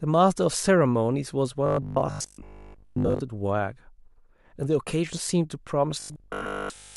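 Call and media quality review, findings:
Robotic sound from repeated short buffers, 1.66–3.20 s and 6.00–6.96 s: rigid 50 Hz metallic buzz over speech, most audio replaced. Likely late-arriving buffers looping a 20 ms segment. Fixed pitch distinguishes it from codec warble.

Lost LE Audio frames, 3.06–3.09 s and 6.42–6.45 s: 30 ms noisy smear each, LC3 concealment reusing the last spectrum with random signs. Noise-like rather than pitched buzz.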